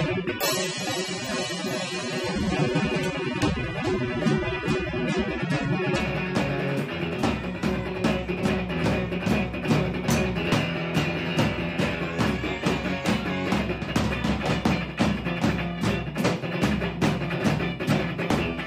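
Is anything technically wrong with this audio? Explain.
Yes, there's one. For the first 6 seconds you're hearing an adaptive stream starting at a low bitrate. The player grabbed a cheap version of the stream so playback could begin fast, then switched up once it had a handle on the connection. Until 6.0 s the top end is dull or synthetic and the codec smearing is stronger, which fits something like 24 kbit/s AAC. Then quality jumps cleanly, with no gap, to something closer to 96 kbit/s.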